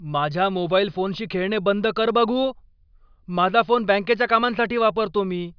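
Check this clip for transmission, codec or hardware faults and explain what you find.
No faults can be heard.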